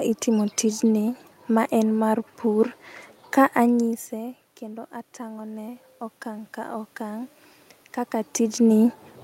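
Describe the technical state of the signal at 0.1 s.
At 0.1 s the audio is intact, with only the background noise of the room present, which belongs to the recording itself and is no fault of the system.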